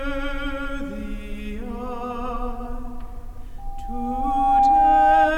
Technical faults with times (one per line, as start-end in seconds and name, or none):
3.58-5.33 loudspeaker feedback squeal